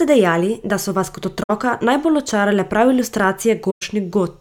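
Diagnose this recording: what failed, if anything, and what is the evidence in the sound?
Codec stage: corrupt frame concealed twice, as the AAC decoder patched damaged frames at 1.42–1.51 s and 3.70–3.83 s.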